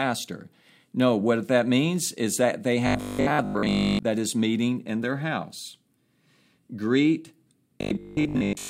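Robotic sound from repeated short buffers, 2.87 to 4.05 s (after "means is that they", before "is meeting in their") and 7.81 to 8.69 s: speech becomes a rigid metallic buzz at 50 Hz, likely from a 20 ms chunk replayed for most of each stretch while fresh audio was skipped.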